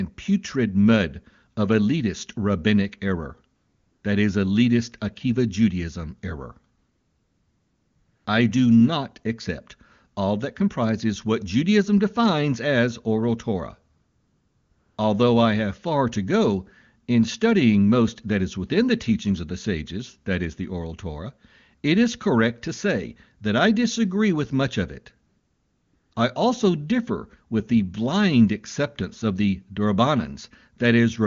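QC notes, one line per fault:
3.55–4.03 s, 6.77–8.25 s, 13.95–14.97 s, 25.27–26.11 s and 26.13–26.15 s: AMR comfort noise. Speech frames stop in each pause, and the receiver substitutes smooth, steady synthetic noise built from a coarse level and spectrum estimate. The real background disappears and snaps back at the edges. The speech between these pauses is clean, which fits a high-rate AMR-WB mode.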